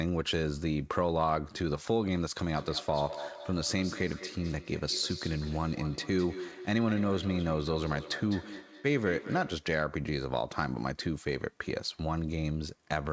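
From 2.57 s to 9.78 s there is feedback echo between two devices. A second device on the same call is playing the first device's audio into the room, and that microphone catches it and sends it back. Its echo canceller ignores sound from the other loudspeaker. The speech returns at a steady interval of roughly a fifth of a second, thinner and more ringing than the original, peaking about 13 dB below it. The call's wideband coding limits everything to below 8 kHz.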